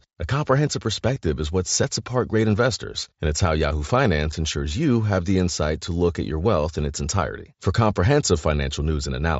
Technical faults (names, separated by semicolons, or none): concealed Bluetooth headset packet loss